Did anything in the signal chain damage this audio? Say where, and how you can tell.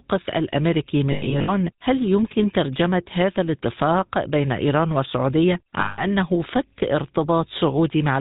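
Yes. The codec stage is at fault throughout. The speech has the buzzy, gravelly roughness of the GSM full-rate codec, consistent with its 13 kbps mode, and the damage is plainly audible. Nothing comes through above 4 kHz. The coder models the vocal tract and drives it with a thinned, regularly spaced pulse excitation, which produces that grainy buzz. Simple band-limiting would sound dull but clean. This sounds dull and rough at once.

Lost GSM frames also show the network or radio link dropping data, twice. From 1.12 to 1.51 s, about 220 ms of frames go missing, scattered across roughly 360 ms. The longest gap is around a tenth of a second. From 5.8 to 6.05 s, about 180 ms is lost. In each gap the decoder repeats the last good frame, so the sound hangs as a metallic ring. A plain dropout would go silent or click instead.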